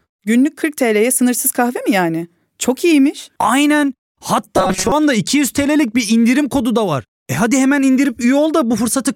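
From 4.57 to 4.92 s the speech collapses into robotic sound from repeated short buffers: a rigid, metallic buzz fixed at 188 Hz that only loosely tracks the words. The likely cause is audio arriving too slowly, so roughly half of that stretch is filled by looping a snippet of about 5.3 ms, which sets the buzz pitch. Unlike a dropout, nothing goes silent, though the real audio behind the repeats is skipped.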